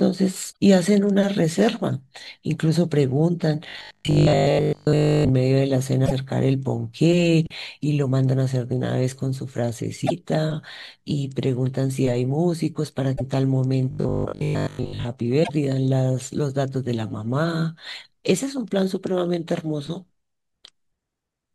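At 0.49 to 0.56 s, damaged data in the compressed stream makes the decoder misread frames, lose sync and hunt for the next frame header. The speech gives way to a brief chirp or squawk.

From 3.69 to 5.33 s, new audio likely arrives too seldom, so playback keeps looping the last short buffer. This is robotic sound from repeated short buffers. A 50 Hz repeat rate fits a buffer of about 20 ms. Most of the real speech is skipped, leaving a rigid, metallic buzz that only loosely follows the words.

The same stream damage returns at 6.02 to 6.12 s, 10.02 to 10.12 s and 13.13 to 13.21 s, each a brief glitch.

From 13.91 to 15.05 s, the likely buffer repetition recurs at 50 Hz, giving the same mechanical buzz.

At 15.40 to 15.50 s, one more corrupted stretch produces a final blip as the decoder resyncs.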